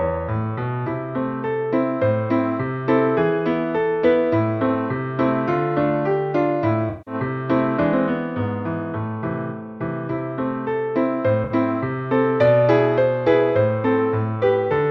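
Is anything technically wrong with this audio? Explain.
Yes. AAC frame loss with concealment at 6.89 s (about 170 ms) and 11.44 s (64 ms): the decoder rebuilt missing frames from earlier spectrum, leaving brief smeared, noisy patches.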